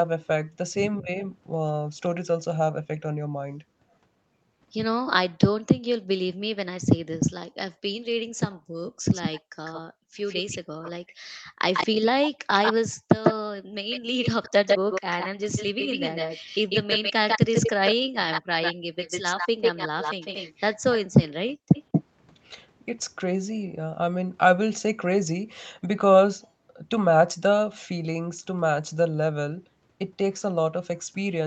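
From 1.02 to 1.09 s, and again from 10.79 to 10.93 s, the speech dips briefly by about 15 and then about 25 dB. This is speech suppressed in double talk, likely the canceller ducking the near talker while the far side speaks. Unlike gating, the speech itself is hit, not the room between words.

Background gated by the echo canceller pulls the room sound down by about 40 dB in parts of 8.28 to 10.15 s, 11.45 to 13.74 s, and 21.58 to 21.71 s. The ambience drops out and snaps back once the canceller lets go.

From 8.87 to 22.04 s, a copy of the voice trails 149 ms behind, only a few decibels quieter. This is an echo leak, likely uncancelled loudspeaker pickup. A delay that long sounds like a distinct repeat, not added room reverb.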